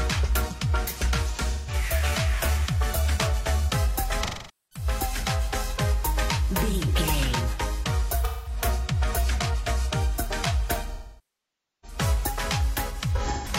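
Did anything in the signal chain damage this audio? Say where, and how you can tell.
Yes. There is AAC frame loss with concealment between the network and the decoder. Lost frames were rebuilt from the last good spectrum, leaving smeared, noisy patches at 1.34–1.74, 4.23–4.85, 8.24–8.57 and 13.15–13.48 s. The roughly 0.9 s loss at 10.94–11.98 s fades toward silence before recovering.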